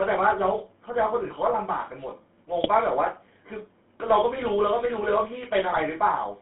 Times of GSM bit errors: 2.64-2.69, 5.70-5.81

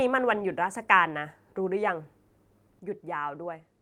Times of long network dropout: none

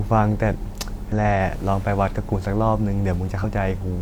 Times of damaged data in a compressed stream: 1.12, 3.39-3.44

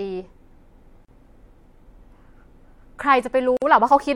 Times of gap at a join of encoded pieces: 1.05-1.08, 3.57-3.62

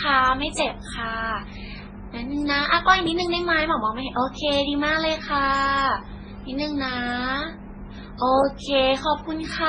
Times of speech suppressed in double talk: none

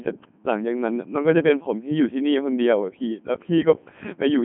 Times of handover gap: none

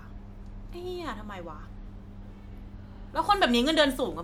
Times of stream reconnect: none

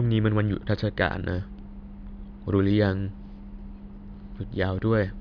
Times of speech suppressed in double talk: none

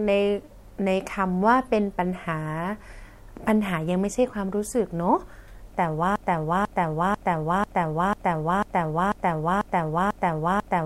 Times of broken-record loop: 6.16-10.86

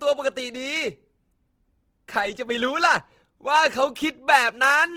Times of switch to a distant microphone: none

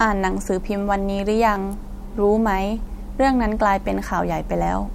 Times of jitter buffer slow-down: none

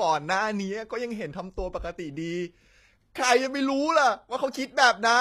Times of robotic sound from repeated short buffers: none

